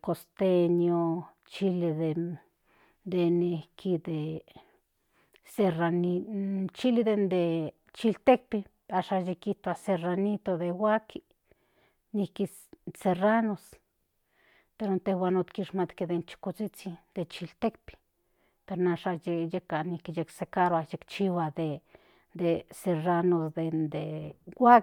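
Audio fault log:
No faults heard anywhere in the speech.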